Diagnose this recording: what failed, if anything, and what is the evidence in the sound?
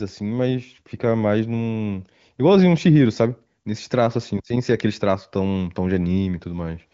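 Nothing stood out on listening to this speech recording; there is no failure at any stage to point to.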